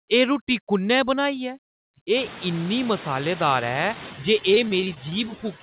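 Speech, carried over a call with nothing above 4 kHz, which fits a narrowband G.711 codec. Noise suppressor artifacts run throughout. Steady noise is pulled down by about 18 dB, so the background pumps between phrases and rises under the voice, especially after the room noise rises around 2 s. From 4.39 to 5.14 s there is repeated packet loss, heard as robotic sound. Short gaps, the longest 22 ms, are patched by stretching the previous sound, leaving that stretch choppy.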